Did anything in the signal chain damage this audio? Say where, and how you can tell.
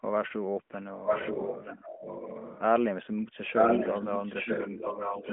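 Yes. Echo leak in call processing: from 1.06 to 2.62 s and 3.54 to 5.32 s, a near-full-level copy trails 917 ms behind, likely escaping an echo canceller. Spectrograms show duplicated patterns offset in time.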